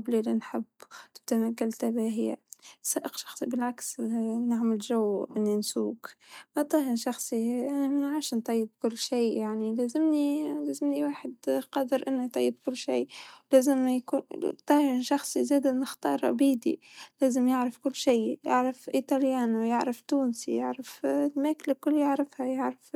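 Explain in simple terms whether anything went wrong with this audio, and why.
Three sharp little clicks pop out of the speech, at 3.33, 15.29 and 18.09 seconds. That's most likely dropped samples: a tiny sliver of audio, well under a millisecond, goes missing, so the waveform jumps abruptly and snaps audibly.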